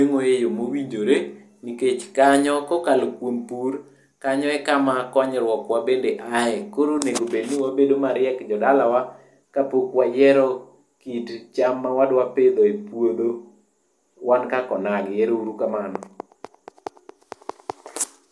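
No technical faults are audible anywhere in the recording.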